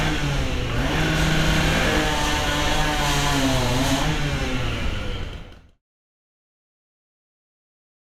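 Nothing's wrong here: the sound just eases out in a smooth editor's fade that begins around four and a half seconds and is gone by 5.83 s, with no click or hard edge.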